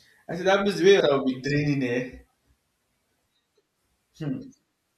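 At 1.00 s, between "that means the way" and "will be draining", and again at 2.75 s, roughly a third of a second vanishes. The edges join directly with no silent gap, unlike a dropout. This is audio missing between chunks, likely lost at a chunk handover.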